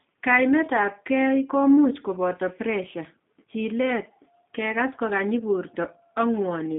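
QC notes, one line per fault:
throughout, G.729 codec: the speech has been rebuilt by a low-rate CELP coder, which fits an 8 kbit/s G.729A link. The band runs from 200 Hz to 3.6 kHz with nothing above 3.6 kHz, so the voice sounds thin and muffled, with a plainly rough, synthetic edge.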